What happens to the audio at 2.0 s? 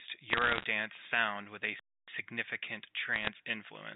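At 2.0 s you're inside a playback stall: right after "sound with a" the speech cuts to silence from 1.79 to 2.08 s, about 0.28 s, likely the player starving for data before resuming.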